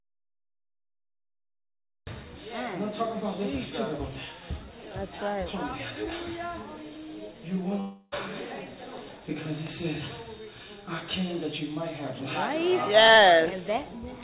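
The clip opens already inside an audio dropout to silence that runs until 2.07 s. For those first two seconds there is silence, with no room tone or hiss at all, which is what a lost input with the recorder still writing zeros sounds like. The likely cause is a disconnected or muted input. Its dead-flat emptiness is what separates it from the network gap later, where the receiver fills the hole with sound.

From 7.8 to 8.14 s comes a long network dropout, lasting about 0.32 s. Instead of going silent, the receiver stretches the last bit of audio into a buzzy, fading continuation that fills nearly the whole gap, then the sound resumes further on with that stretch missing. Packets likely stopped arriving on the call path. Through the G.711 A-law channel, which carries nothing above 4 kHz, the fill sounds narrow and synthetic rather than empty.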